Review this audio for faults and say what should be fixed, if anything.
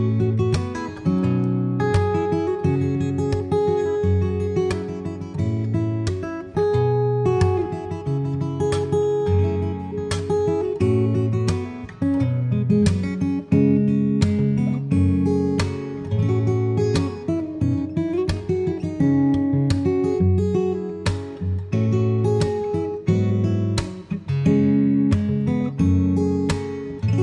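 No faults; nothing to fix.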